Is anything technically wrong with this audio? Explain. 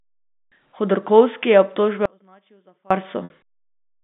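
Yes. At 2.06 s, just after "je obtožbe", the sound drops abruptly to a faint residue about 30 dB down for 850 ms until 2.91 s. This is an audio dropout, likely a lost signal on a still-live path, and its sudden edges separate it from a pause or fade. At 3.24 s, packet loss with pitch repetition bridges a 60 ms gap, consistent with three lost packets, by repeating the last pitch period. It sounds like a brief buzzy hold that fades out, through the 150 Hz to 3.6 kHz telephone band.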